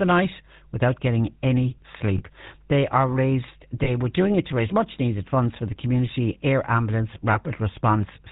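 Speech clip. The GSM full-rate codec colours it throughout with a plainly audible buzzy, gravelly roughness and nothing above 4 kHz, which fits 13 kbps. Lost GSM frames cause brief metallic rings at 2.18–2.22 s after "night without getting any", at 3.84–3.90 s between "are raised" and "were doing it to", and at 7.32–7.38 s after "the community air ambulance". Each sounds like one lost 20 ms frame replaced by the previous frame's settings.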